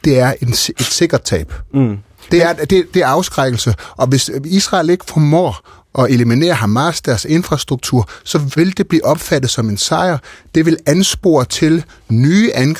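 No technical faults can be heard anywhere in the recording.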